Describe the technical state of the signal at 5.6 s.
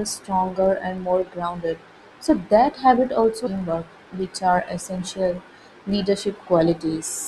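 At 5.6 s the filter restarted on every block fault is present, as it is throughout the clip. The filter discards its stored state at each block boundary and begins again from silence, so every block opens with a small transient. Those transients recur about every 20 ms, which fits the block size and gives a 50 Hz buzz riding on the speech. The buzz rises and falls with the speech's level.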